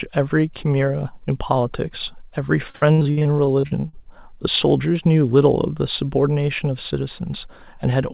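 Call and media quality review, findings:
Repeated packet loss (robotic sound), 2.7–4.33 s: choppy speech, 17 gaps, longest 61 ms, each patched by extending the last sound. Nothing above 4 kHz points to a G.711 call path.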